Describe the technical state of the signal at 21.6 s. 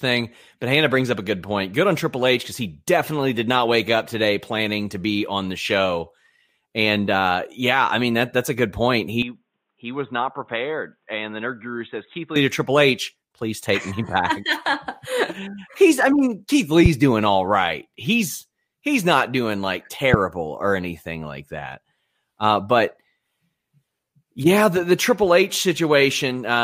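At 21.6 s the speech signal is intact, with no audible fault at that moment.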